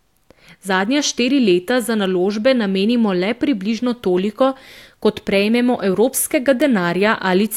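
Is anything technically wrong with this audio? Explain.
Yes. Bit error spikes at 0.85 s, 2.05 s (just before "naložbe namenimo le približno") and 6.62 s: a single flipped bit jolts one sample, peaking at about −29, −17 and −5 dBFS, heard as sharp broadband ticks.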